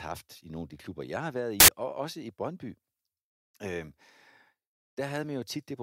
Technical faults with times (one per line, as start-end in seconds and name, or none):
1.60-1.68 samples built from the wrong bytes